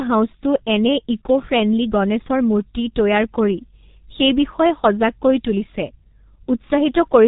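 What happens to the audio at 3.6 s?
At 3.6 s the speech, like the whole clip, carries heavy G.723.1 codec damage: 30 ms frame coding, consistent with roughly 6 kbit/s, leaves it muffled and hoarse, with a spectrogram blank above 3.8 kHz.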